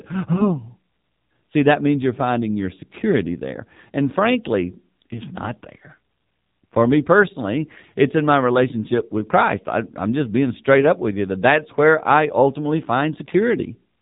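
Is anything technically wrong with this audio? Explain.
Yes. Throughout, the speech passes through the AMR narrowband mobile codec at a rate that fits 7.4 kbps. Nothing above 4 kHz survives, and the low-bitrate vocal-tract model gives a plainly buzzy, synthetic tone. That steady coloration distinguishes it from a simple low-pass filter, which would dull the sound without the buzz.

From 0.34 to 0.60 s there are AMR bit errors. A few percent of the weakly protected bits in several frames were flipped, so the excitation pulses and fine gain and spectral values decode wrongly. Pitch and level hold roughly steady, but the sound turns hoarse and gargly. Unlike frame loss or concealment, nothing drops out or repeats.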